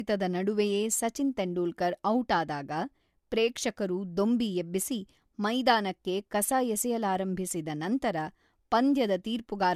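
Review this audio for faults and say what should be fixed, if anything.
Throughout the speech, nothing is present above 14 kHz, and the artefacts of a coarse first encoding remain. This is low-bitrate audio saved at a high bitrate, likely an earlier encode around 64 kbit/s re-saved as a larger MP3. On a spectrogram, the energy stops at a hard, flat ceiling at 14 kHz across the whole clip. To prevent it, export from the original lossless or uncompressed source rather than transcoding an already compressed file.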